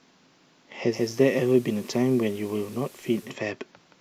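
At 0.88 s, digital radio blending to analogue: a 0.16 s fade to FM, about 1 dB down, hiss lifting the spectrogram floor until 3.37 s.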